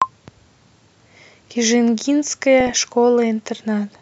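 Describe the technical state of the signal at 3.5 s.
Nothing is wrong with the audio at 3.5 s; the signal is intact at that point.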